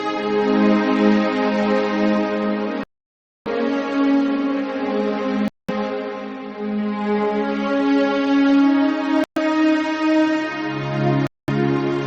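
The sound cuts to clean silence four times, at 2.84 to 3.48 s (about 625 ms of silence), 5.48 to 5.70 s, 9.24 to 9.38 s and 11.27 to 11.50 s, likely Bluetooth stalls where the buffer ran dry. Unlike codec dropouts, there is no warbling, only dead gaps.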